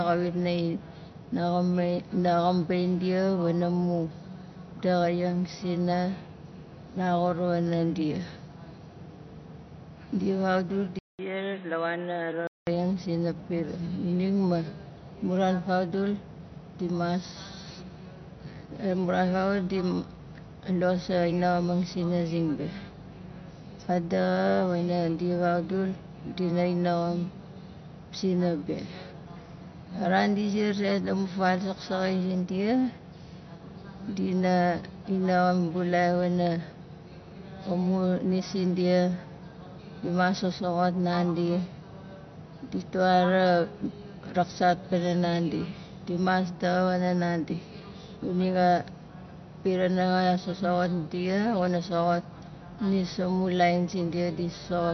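This speech clip was likely encoded as low-bitrate MP3, with a sound that fits roughly 48 kbps. The encoder discarded all content above 6.1 kHz and zeroed weak frequency lines, leaving plainly audible watery, swirly artefacts across the whole recording. From 10.99 to 12.67 s, the input likely switched to a poorer device. Its narrower band removes everything above 4 kHz, so the sound turns dull and boxy. A 200 ms silence marks the switch, the level drops by about 5 dB, and new background noise appears roughly 30 dB below the signal.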